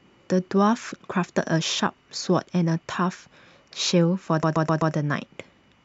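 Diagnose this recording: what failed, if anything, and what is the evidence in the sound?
The failure sits at the codec or storage stage: repeated frames. From 4.43 to 4.94 s the same 128 ms block of speech plays again four extra times, producing a rhythmic stutter and stretching the recording by 512 ms. That block length fits a short run of compressed frames being written or sent more than once. On a spectrogram, one 128 ms pattern is tiled side by side, and the waveform shows the same envelope copied at regular intervals.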